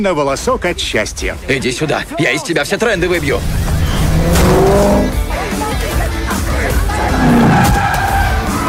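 Hard clipping runs through the whole clip, from the start to the end: the sound was driven about 7 dB beyond what some stage in the chain could pass, so every peak that crosses that ceiling is sliced off flat. Only a small share of the waveform, a few percent, actually hits the limit, so the damage lands on the loudest moments as a gritty crackle. The squared-off tops throw energy into high harmonics that were never in the original sound.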